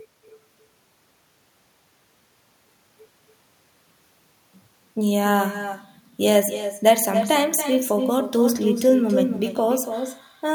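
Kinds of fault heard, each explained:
Echo with no canceller: The far end's loudspeaker feeds its microphone unremoved. Throughout the speech, a quieter copy about 7 dB down trails each phrase by roughly a third of a second.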